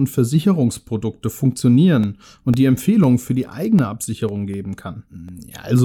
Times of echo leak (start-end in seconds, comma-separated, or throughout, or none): none